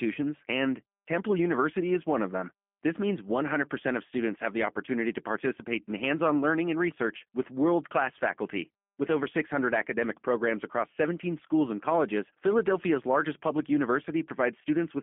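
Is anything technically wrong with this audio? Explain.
Yes, the speech runs through a G.729 codec for the whole clip, which fits an 8 kbit/s VoIP link. It's band-limited to roughly 200 Hz to 3.5 kHz, with nothing above 3.6 kHz. Each 10 ms frame is rebuilt from a vocal-tract filter, pitch predictor and a few pulses, so it sounds plainly rough and synthetic.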